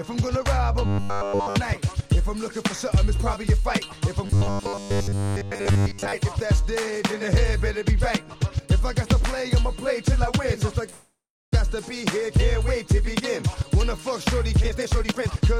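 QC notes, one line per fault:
0.86–1.56 s and 4.26–6.14 s, robotic sound from repeated short buffers: the sound turns into a rigid metallic buzz at 100 Hz, a tone fixed by the loop length rather than the source, which points to a 10 ms buffer. The likely cause is audio arriving too seldom, so the receiver replays its last fragment while real audio is skipped. The first stretch is almost entirely repeated material, the second roughly 70 %, so it still loosely tracks the original.
10.89–11.54 s, call audio freeze: playback stalls and the last sound is stretched into a decaying buzz or hiss, then about 380 ms of silence, 628 ms filled in total. This is likely delayed packets draining the jitter buffer. Nothing is lost, as playback resumes exactly where it stopped, but everything after this point runs 628 ms later than before.
14.64–15.60 s, jitter buffer speed-up: the audio runs at about 151 % speed with its pitch unchanged, sounding hurried. 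The buffer was holding more audio than its target, so the receiver cut out short pitch-period-sized pieces in quick succession, removing around half a second in total to bring the delay back down.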